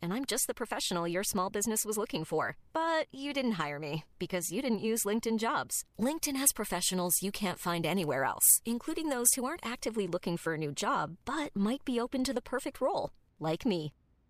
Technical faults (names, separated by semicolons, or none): pre-emphasis left on